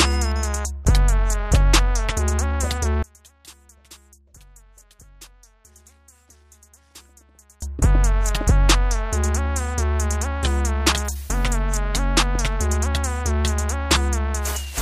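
From 3.03 s to 7.62 s, the level collapses by about 31 dB, most likely because one channel was inverted: one side of the stereo pair had its polarity flipped, so whatever both channels share cancels as soon as they are summed to mono. The centred material and low end drop almost to nothing, leaving only the faint difference between the channels, a faint residue, until the full sound returns at 7.62 s.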